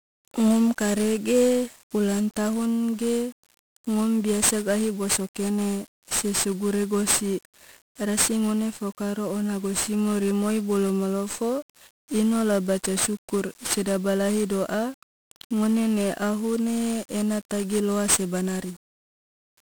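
From start to finish the speech is fuzzy and crackly, with the treble dulled or replaced by hiss. That is heavy 1-bit DFPWM compression. One bit per sample only nudges an adaptive level up or down, leaving strong broadband quantisation noise, at a rate that fits about 48 kbps.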